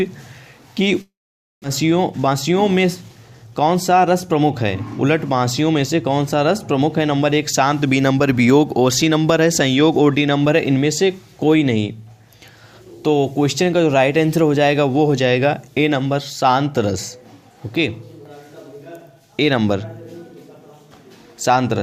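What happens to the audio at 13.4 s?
Nothing goes wrong at 13.4 s: the audio runs on intact there, with no dropout, click, distortion or other fault at that moment.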